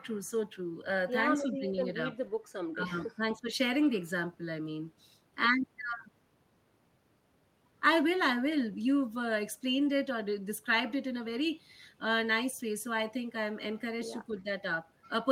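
At 1.39–1.78 s, 2.73–2.94 s, 3.16–3.51 s and 14.28–14.48 s the speech dips, by up to about 15 dB. This is likely speech suppressed in double talk, with the echo canceller ducking the talker while the far side spoke. The waveform envelope shows short notches, and spectrogram columns fade.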